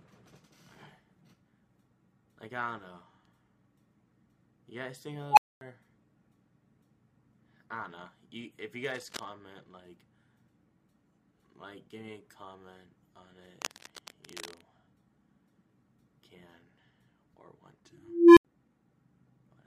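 The audio contains two unstable filter events. At 5.30–5.61 s a tone near 1 kHz swells over about 71 ms, clips, then drops out for 240 ms. At 17.93–18.45 s a tone around 300 Hz builds more slowly, over about 441 ms, before an 80 ms silence. In both cases a recursive filter's feedback grew without bound until its output overflowed and reset. Cable scratch noise appears at 8.84–9.29 s and 13.61–14.66 s as dense, irregular crackling at roughly the programme level, likely from a worn cable, connector or control being disturbed and changing contact resistance.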